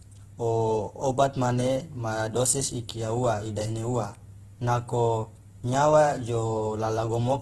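Opus compression runs throughout the speech, likely from encoding at a very low bitrate, roughly 12 kbps, in the codec's CELT music mode. Starved bands are filled with folded or noise-like content, so the voice sounds grainy and rough, with nothing above 12.2 kHz.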